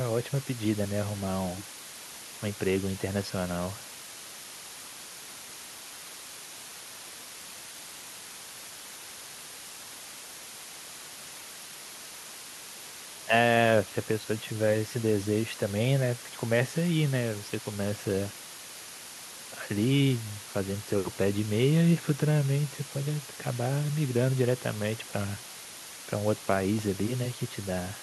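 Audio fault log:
throughout, low bit depth with dither: A steady, even hiss sits under the speech from start to end. It stays roughly 15 dB below the speech level, so it is plainly audible. The level and evenness point to a word length of about 6 bits. Before each sample was rounded to so few steps, dither noise was added. This turns the rounding error into constant white noise rather than grainy distortion that would track the speech.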